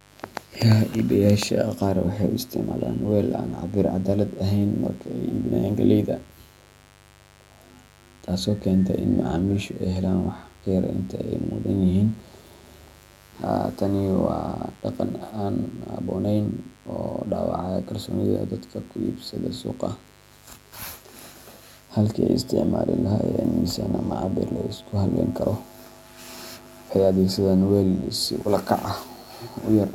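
A steady mains buzz runs under the speech throughout, built on 50 Hz harmonics from switching spikes, sitting roughly 30 dB below the voice as a raspy drone.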